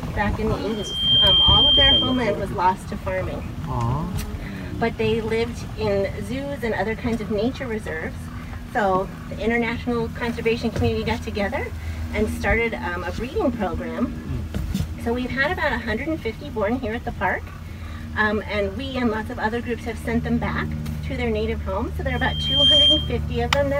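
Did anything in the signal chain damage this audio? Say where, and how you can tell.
Yes. Loudspeaker feedback squeal occurs at 0.69–2.36 s and again at 22.08–23.19 s, in the acoustic loop between loudspeaker and microphone. A single 3.2 kHz tone swells within about half a second to roughly 10 dB above the sound, showing loop gain exceeding one there.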